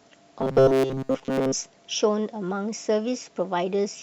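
From 0.40 to 1.52 s, new audio likely arrived too seldom, so a short buffer, which fits a 7.5 ms length, was replayed over most of the real signal. This robotic sound from repeated short buffers turns the speech into a rigid, metallic 133 Hz buzz.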